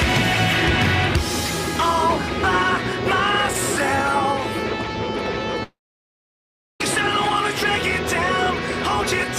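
Long network dropout, 5.63 to 6.81 s: a fading buzz, then 1.07 s of silence, likely from undelivered packets; 1.17 s of audio never returns.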